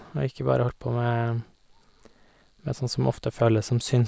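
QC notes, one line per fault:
No fault to note.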